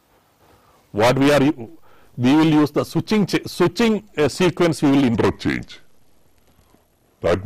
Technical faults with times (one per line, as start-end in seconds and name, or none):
5.15-7.45 section at the wrong speed